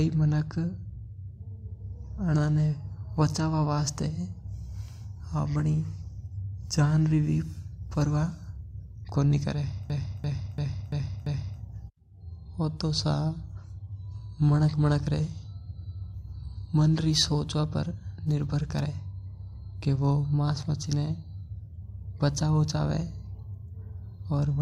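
At 0.94–0.96 s and 2.18–2.20 s, compressed frames were skipped: the decoder lost single 42.7 ms frames, so the speech jumps ahead by about 40 ms. At 9.09–9.12 s, just before "कोनी करे", two frames go at once, a longer skip of roughly a tenth of a second.

From 9.90 to 11.61 s, just after "कोनी करे", a system hang loop occurs. The computer froze while the audio hardware kept replaying one 16384-sample ring buffer. A 341 ms fragment repeats five times at 2.93 Hz, briefly stalling the speech.

Single-frame skips return at 15.70–15.72 s and 17.88–17.92 s, each a short jump where about 40 ms drops out.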